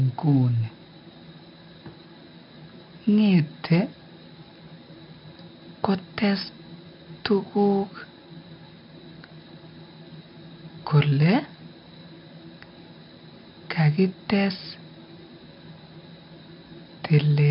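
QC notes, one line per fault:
Throughout, 4-bit ADPCM compression: heavy gritty hiss riding every loud syllable, coarse steps lagging on attacks, nothing above 5.3 kHz, fitting about 44 kbps.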